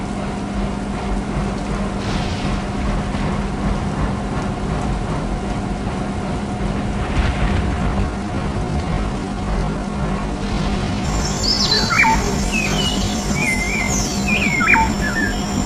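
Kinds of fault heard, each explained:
Time-stretched section: From 7.64 s to the end, the audio plays at about 0.69 speed with unchanged pitch, so it drags. Likely software stretching to fit a length.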